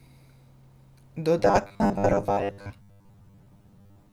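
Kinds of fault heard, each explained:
Robotic sound from repeated short buffers: from 1.39 s to the end of the speech, the voice turns into a rigid, metallic buzz at 100 Hz that only loosely follows the words. The likely cause is audio arriving too slowly, so the playback side keeps looping the most recent fragment, about 10 ms long to match the 100 Hz buzz, while real audio is dropped. Roughly half of what is heard in that stretch is repeated material.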